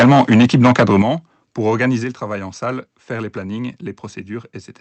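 Microphone overload from 0.0 to 1.02 s in this speech recording, likely from input volume set about 6 dB too high, flattens the peaks of roughly a sixth of the samples and leaves a harsh, crackly edge on the loudest syllables. Microphone volume stepped down at 1.02 s and again at 2.04 s drops voice and background together, by about 9 dB and then about 5 dB, likely the call software cutting the device's input gain after the distortion. Throughout, the audio is band-limited to 8 kHz, consistent with an Opus-coded WebRTC call path.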